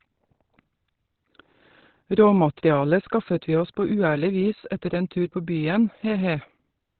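Opus compression runs throughout the speech: nothing remains above 4.3 kHz, and the sound is muffled and hoarse with heavy codec damage. This likely comes from Opus dropping to its narrowband SILK speech mode, which fits a rate near 12 kbps.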